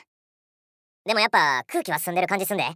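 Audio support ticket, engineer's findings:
Wrong sample rate, entire clip. Sound runs fast and pitched high together, about 1.45x speed, roughly 6.5 semitones up. Playback clock mismatch, no resampling stage; ratio fits 22 kHz material clocked out at 32 kHz. Check output rate config.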